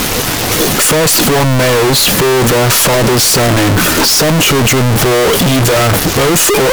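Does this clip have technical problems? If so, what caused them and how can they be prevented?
Yes. Throughout the speech the waveform is nearly square at an almost fixed, high level, very loud and harsh, with background noise as loud as the voice. This points to float read as integer, likely 32-bit float samples interpreted as 32-bit integers. Prevent it by declaring and checking the sample format at every read.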